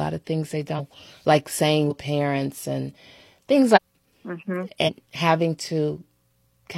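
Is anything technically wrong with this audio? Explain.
Yes. At 0.75, 1.86, 3.72 and 4.83 s the speech jumps forward, losing roughly a third to half a second each time. These are compressed frames skipped: whole frames, which fit a length of about 46 ms, were missing or rejected by the decoder.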